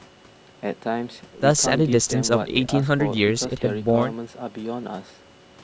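No technical faults are present in the speech, which carries the ordinary signature of call microphone processing: the lowest bass is trimmed by its high-pass filter and nothing sits above 8 kHz.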